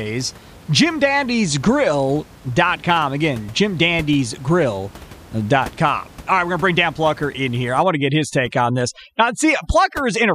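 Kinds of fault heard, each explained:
Overdone noise removal: from 7.83 s, just after "in here I", to the end, an over-aggressive spectral noise reducer cuts bands near its estimate of the room noise (about 22 dB below the speech), taking quiet speech detail too, leaving twinkling near-silence.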